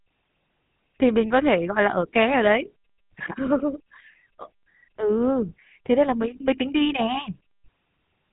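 From start to finish the speech carries GSM full-rate codec damage, plainly audible. The codec models the vocal tract and drives it with a sparse, regularly pulsed excitation, leaving a buzzy, gravelly roughness, and nothing passes above about 3.8 kHz, so the sound is narrow and dull. The rate fits 13 kbps.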